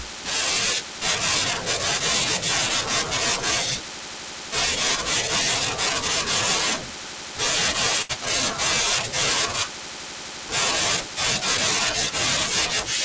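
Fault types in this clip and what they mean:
Short stall from a late packet: At 8.02 s a packet arrived late and the jitter buffer ran dry. Rather than go silent, the receiver held the last sound, stretching it by 75 ms until about 8.11 s. Playback then resumed from the same point, so nothing is lost. One sound is drawn out too long, with a slight buzz or dip. Everything after it plays 75 ms later.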